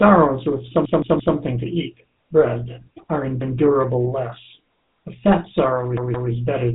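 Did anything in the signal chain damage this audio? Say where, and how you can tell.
Yes. The codec stage is at fault: the speech passed through a GSM full-rate codec, which models the vocal tract and rebuilds excitation from sparse regular pulses. Throughout the clip, the voice has plainly audible buzzy, gravelly roughness and nothing above 3.8 kHz, which fits the 13 kbps full-rate mode.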